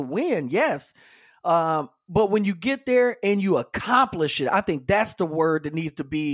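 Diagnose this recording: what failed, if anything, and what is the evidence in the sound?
No fault found in this recording.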